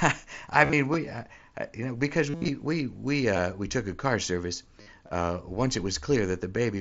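Concealed Bluetooth headset packet loss hits at 0.59 to 0.73 s, 2.30 to 2.48 s (after "uh you know because", before "we we") and 4.81 to 4.87 s (after "took a car service"). Headset packets went missing and the phone patched the gaps with recycled bits of recent waveform. The 2.3 s burst, with runs up to about 68 ms, comes through as a held buzzy tone that warbles when the real speech returns.

Then at 5.07 to 5.10 s, just before "uh once it", there's a repeated buffer: one ~12 ms chunk, which fits a 512-sample buffer, plays twice more with hard joins, so you hear a quick buzzy stutter.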